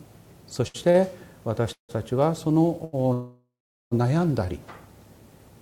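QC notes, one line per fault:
0.67–0.76 s, 0.90–0.96 s and 2.84–2.95 s: short stall from a late packet. The last sound is held and stretched for roughly 70, 40 and 90 ms, with a faint buzzy or dipped quality, then the audio resumes exactly where it paused. Each delay pushes the rest of the clip later, and nothing is skipped. Unlike a freeze, the hold never decays into silence and is too brief to read as a gap.
1.72–1.91 s and 3.13–3.93 s: call audio freeze. The sound smears into a fading buzz and then drops out, with about 110 ms of silence in the first (167 ms filled) and about 410 ms in the second (786 ms filled). Playback then continues from the same point with nothing lost. The likely cause is packets delayed long enough to empty the jitter buffer. The audible fade-to-silence and the length mark these apart from the brief stalls.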